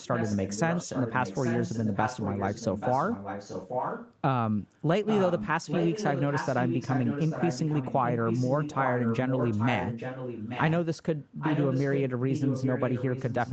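From 0 to 4.16 s, then 5.06–5.48, 5.65–10.72, 11.39–12.01 and 12.31 s to the end, an echo leak is heard. A copy of the speech trails it by 833 ms. It starts about 10 dB down, then grows louder, about 5 dB down. The likely cause is a far-end speakerphone whose echo canceller let its own playback through.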